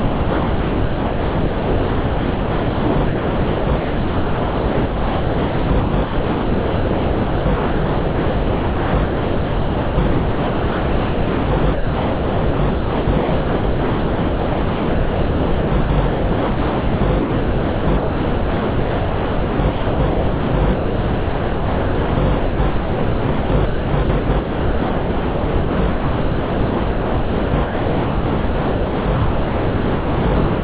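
From 0.0 to 30.61 s, the sound is chopped by the voice detector. Real sound keeps dropping out and being replaced. About 27.4 s of the clip is synthetic fill. The gaps sound like a flat, steady hiss that fits RFC 3389 comfort noise. The likely cause is a sender-side detector that repeatedly judged the sound inactive and stopped sending it. The result is choppy throughout. Nothing above 4 kHz survives, which fits a G.711 mu-law call path.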